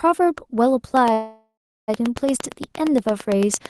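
Speech with a train of clicks: from 0.97 s to the end, a steady ticking of about 8.7 clicks per second sits over the speech and the pauses, peaking about 10 dB above the voice. The clicks are regular and similar in shape, which likely points to interference or a faulty connection or power supply injecting a repeating pulse. A call audio freeze runs from 1.13 to 1.90 s. The sound hangs as a fading buzz or hiss and then drops to about 350 ms of silence before the speech resumes exactly where it stopped, with nothing lost and about 745 ms of delay added. This is likely packets held up in transit, draining the jitter buffer. The audio passed through an Opus call path whose band reaches about 12 kHz.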